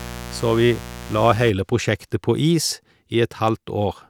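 Mains buzz runs from 0.0 to 1.5 s under the speech, then stops. It is a steady, raspy buzz built on 60 Hz, sitting roughly 15 dB below the speech. Its edge comes from sharp switching spikes, twice every mains cycle, getting in through a dimmer, a rectifier or an unshielded lead. Those spikes carry harmonics of 60 Hz up into the kilohertz range, so the interference rasps rather than hums.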